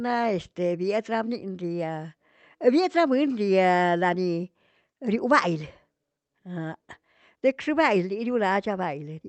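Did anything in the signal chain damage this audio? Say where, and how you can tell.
No, nothing damaged it.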